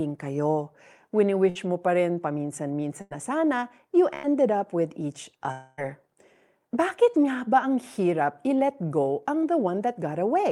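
At 1.49 s, 3.01 s (just before "na sana you") and 4.15 s (before "up with each"), bursts of packet loss leave 60 to 100 ms missing. Each gap, filled for 58 to 94 ms, is a fading continuation: a smeared, decaying band on the spectrogram, then a jump. From 5.52 to 5.80 s, after "up with each", a 260 ms fading fill with no silence, likely a long network dropout, shows as a long decaying band.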